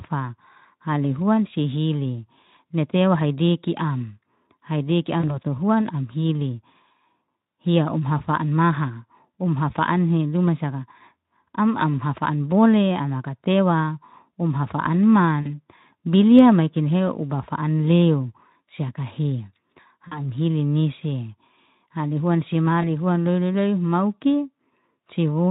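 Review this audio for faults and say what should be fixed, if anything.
VoIP packet loss concealed by the speech codec occurs at 5.19 to 5.39 s, just after "tewa haidiki am haidiki", again at 15.41 to 15.58 s and 20.08 to 20.35 s, and at 22.82 to 22.87 s, right after "huan si". In the first three, about 40 ms of audio went missing, which fits two lost 20 ms packets. In the last, about 20 ms went missing, which fits a single packet. The decoder filled each hole by extending its last pitch and spectral shape at falling gain, so the speech smears into a brief buzzy tone or coloured noise that fades. Because each frame depends on the previous one, the speech stays weak or distorted for a short stretch after packets resume, which is why the first three disturbances run past the gap itself. This is layered on a light graininess consistent with a mid-rate Speex encoding. To prevent it, add forward error correction or redundant packets and a sufficiently deep jitter buffer on the network path.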